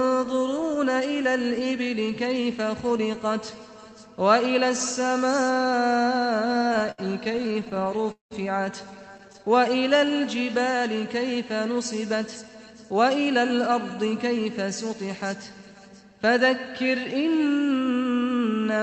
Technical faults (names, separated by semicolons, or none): repeated stalls (stutter); jitter buffer slow-down; jitter buffer speed-up